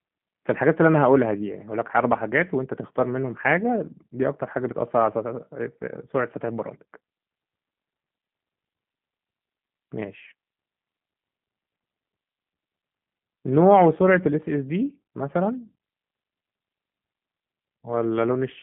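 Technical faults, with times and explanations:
Throughout, G.729 codec: speech is rebuilt at 8 kbit/s from a vocal tract filter and sparse pulses, confined to about 150 Hz–3.5 kHz, giving plainly rough, synthetic timbre.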